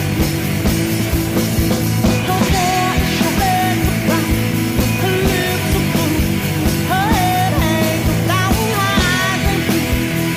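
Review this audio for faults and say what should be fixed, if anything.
At 3.37 to 3.39 s the audio lurches forward with no audible gap. Roughly a second of material is missing, and the two sides are butted almost directly together. This is a skip ahead: a stretch was lost in transit or discarded by an overflowing jitter buffer while later audio was already queued. To prevent it, give the jitter buffer enough headroom and let it drain gradually by time-scaling rather than dropping whole chunks.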